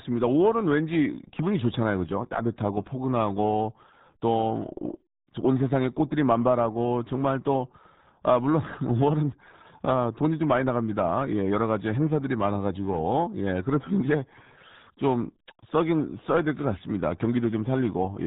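From start to finish the speech carries the sound of the RealAudio 14.4 codec: nothing passes above 3.8 kHz, and heavy coding damage leaves it muffled and gargly, which fits an 8 kbit/s dial-up-era speech coder discarding most spectral detail.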